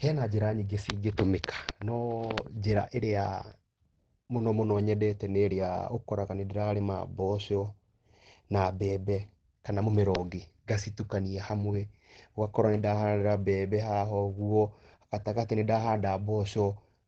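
From start to finish, the speech carries plainly audible Opus compression. Nothing reaches above about 8.9 kHz, so the top end is missing and the sound is dull. The damage sounds muffled and hoarse, like the codec's speech mode. That mode is built for voice at low rates and keeps only a wideband range. The likely cause is heavy encoding at a low bitrate, which fits something around 16 kbps.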